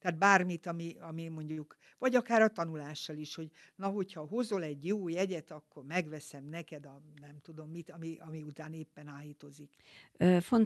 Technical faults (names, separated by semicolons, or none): short stall from a late packet